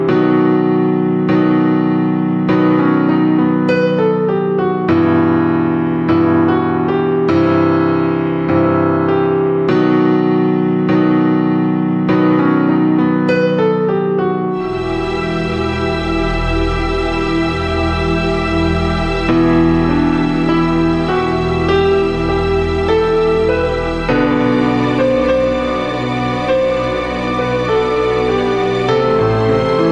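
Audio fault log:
No faults were heard anywhere in this audio.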